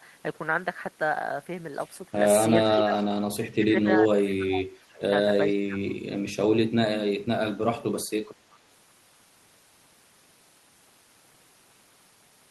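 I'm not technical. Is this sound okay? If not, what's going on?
No. The voice sinks and partly drops away three times: briefly from 2.72 to 2.96 s, for a longer stretch from 3.40 to 5.05 s, and briefly again from 5.59 to 5.79 s, where it dips deepest. This sounds like speech suppressed in double talk, likely because the far side spoke over this talker and the call's echo-removal turned both down. Unlike a network dropout, the voice is turned down by the echo-removal rather than lost on the way.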